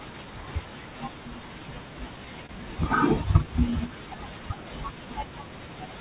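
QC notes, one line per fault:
2.46 to 2.52 s, short stall from a late packet: a packet arrived late and the jitter buffer ran dry, so the receiver stretched the last sound by about 27 ms to fill the gap, then resumed exactly where it stopped. Nothing is lost, and the delay grew by that same 27 ms. Unlike a dropout or concealed packet loss, there is no skipped sound, only one held moment with a faint buzzy or dipping texture.
3.43 to 4.20 s, jitter buffer slow-down: the receiver built a reserve by repeating single pitch periods and slivers of pauses many times over, adding about 45 ms across this stretch so playback runs at roughly 95% speed. Pitch stays put, which separates this from a tape-style or resampling slow-down, and the stretching is spread thinly rather than concentrated in one held sound as in the stall. Through the narrowband call path, with nothing above 4 kHz, it comes across as slightly drawn-out sound.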